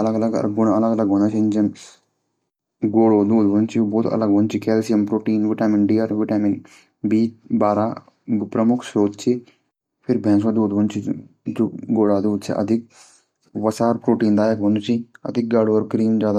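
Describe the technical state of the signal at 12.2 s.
At 12.2 s the signal is intact, with no dropout, clipping, distortion or other technical fault to be heard at that point.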